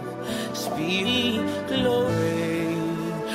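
At 1.03 to 1.07 s, 2.05 to 2.09 s and 3.16 to 3.22 s there is damaged data in the compressed stream, each event lasting roughly 45 to 55 ms. Corrupted bytes leave the decoder unable to parse the affected frames correctly, so it loses frame sync and hunts for the next valid header. Each event is heard as a brief chirp, squawk, click or short hole that interrupts the sound.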